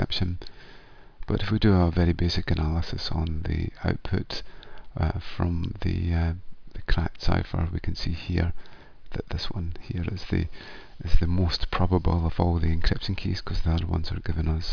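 No technical faults are audible.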